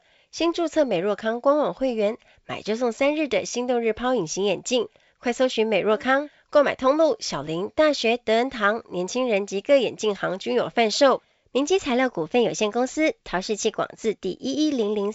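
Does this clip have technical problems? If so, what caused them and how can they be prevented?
No, this clip has no technical problems.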